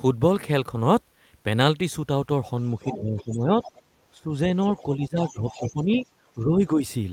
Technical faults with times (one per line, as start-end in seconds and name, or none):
2.82-3.23 other side's voice leaking through
2.84-3.61 speech suppressed in double talk
3.63-3.71 other side's voice leaking through
4.16-4.34 speech suppressed in double talk
4.63-6.07 other side's voice leaking through
4.96-6.03 speech suppressed in double talk
6.34-6.82 speech suppressed in double talk